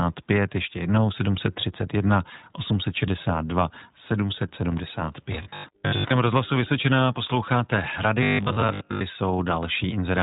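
Across the whole recording the speech carries the signature of the iLBC codec: nothing passes above about 3.8 kHz, so a spectrogram shows a hard ceiling with empty space above it. The coding damage is plainly audible as a slightly rough, synthetic edge. The character points to iLBC's 20 ms frame mode, which fits the 15.2 kbps rate, with each frame's excitation coded independently rather than predicted from the previous one.

From 5.33 to 6.11 s the voice turns into a rigid, metallic buzz at 50 Hz that only loosely tracks the speech. This is robotic sound from repeated short buffers. The likely cause is new audio arriving too slowly, with the player filling the gaps by replaying a 20 ms chunk. The 50 Hz pitch is one over that chunk length, and here roughly half the audio is repeated material. On a waveform the segment shows identical 20 ms cycles stacked in runs, and a spectrogram shows evenly spaced harmonic lines 50 Hz apart.

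The same fault returns from 8.23 to 9.01 s with the same 50 Hz buzz. This time most of the stretch, around 70 percent, is repeated, so less of the real speech comes through.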